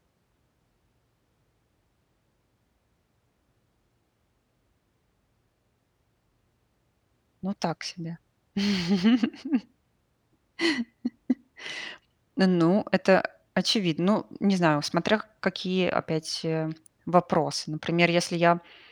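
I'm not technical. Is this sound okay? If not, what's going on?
Yes, nothing stood out as a problem when listening to this recording.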